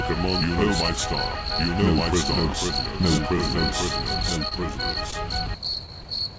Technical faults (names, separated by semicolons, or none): doubled audio track; scattered short gaps